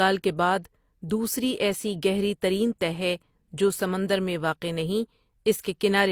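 Throughout the speech, two kinds of codec smearing overlap, with nothing above 20.2 kHz. This likely comes from transcoding between lossy codecs, consistent with HE-AAC re-encoded as Opus.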